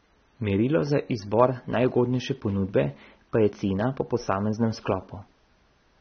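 Throughout, the speech is dull and cut off above 6.3 kHz, with fizzy, warbling sibilants that a plain low-pass lacks. This is likely AAC compression, fitting about 24 kbps.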